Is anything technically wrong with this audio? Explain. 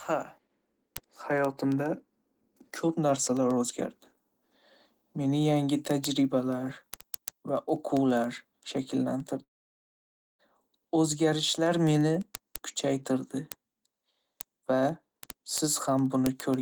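Yes. From 9.43 to 10.41 s the speech cuts out, most likely from a long network dropout. Roughly 0.96 s of audio never arrived, so the receiver briefly carries the last sound as a fading buzz, then leaves about 0.93 s of silence before speech resumes with that stretch gone.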